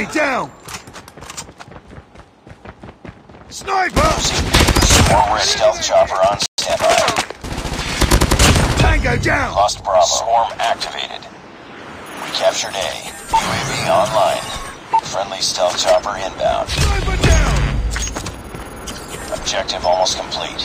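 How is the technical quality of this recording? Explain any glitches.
There are two linked glitches: a brief dropout followed by a short hurried stretch as playback recovers.

Playback stall, 6.46 to 6.58 s: the output goes silent for about 120 ms in mid-flow. The likely cause is the player running short of buffered data or its audio thread being held up, so nothing reached the output until it recovered. The gap is short but clearly audible as an abrupt hole before the sound resumes.

Time-compressed catch-up, 6.58 to 6.82 s: right after the dropout, the audio runs at about 1.5 times normal speed while keeping its pitch. The player is working off the backlog left by the stall, trimming out tiny slices and cross-fading the joins so the timing snaps back into place. That splicing gives the passage a rushed feel until normal pace returns.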